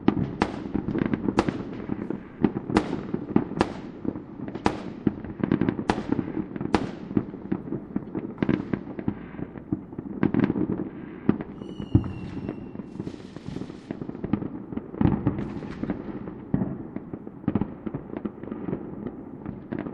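A recording of everyday sounds has a watery, swirling quality throughout, with dulled treble, metallic chirps on sharp high-frequency detail and smeared attacks. This is plainly audible MP3 compression, likely from a bitrate around 64 kbps, where the encoder starves weak frequency lines and cuts the top end. Two short glitches come from a corrupt frame decoded: a faint one at 8.01 to 8.09 s, quiet at roughly -45 dBFS, and a louder one at 15.87 to 15.89 s, peaking near -25 dBFS. Each covers only two or three damaged frames whose garbled data put energy at the wrong frequencies.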